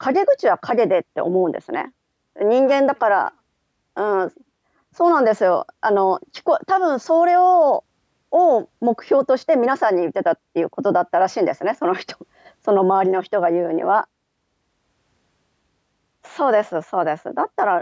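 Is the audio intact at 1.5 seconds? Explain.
Yes, at 1.5 seconds the speech plays through cleanly, with no dropout, click, distortion or other audible fault at that moment.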